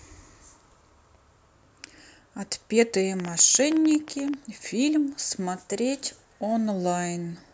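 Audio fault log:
3.20–4.35 s, train of clicks: around fifteen similar pops at an uneven pace of about 11.4 per second, peaking roughly 10 dB above the speech, likely from electrical interference or a faulty connection or power supply. On the waveform they appear as sharp spikes, and on the spectrogram as thin vertical broadband lines.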